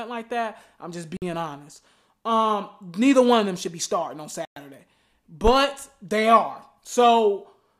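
Speech with two brief dropouts to silence, each consistent with a Bluetooth stall. The first runs from 1.17 to 1.22 s (51 ms), right after "like that I'm just"; the second from 4.45 to 4.56 s (112 ms), after "should be starting on". In both, the audio cuts out cleanly and then resumes. The likely cause is radio interference delaying packets until the headphones' buffer emptied, pausing playback until the retransmitted data arrived.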